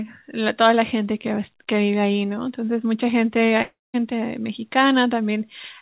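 At 3.62 s the speech stops abruptly. The last sound is stretched into a buzzy, fading tone, then about 200 ms of near silence follows, and the speech resumes at 3.96 s with roughly 320 ms of material simply gone. This is likely a long network dropout with the receiver concealing the gap. On a spectrogram, already empty above 4 kHz as a call path would leave it, the gap shows a smeared, fading band followed by a blank column. The waveform shows a decaying envelope that flattens to almost nothing.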